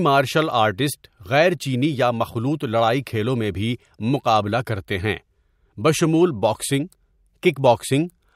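A short speech recording with no technical fault to report. Nothing in it calls for a time stamp or a cause.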